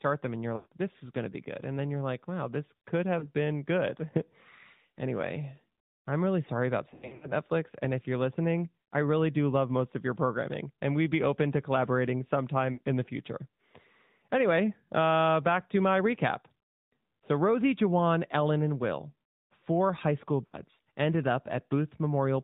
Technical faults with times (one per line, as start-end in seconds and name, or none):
0.00-22.44 AMR narrowband mobile codec
0.56-0.73 lost AMR speech frames
3.20-3.29 lost AMR speech frames
6.90-7.32 lost AMR speech frames
12.74-12.81 lost AMR speech frames
20.46-20.57 lost AMR speech frames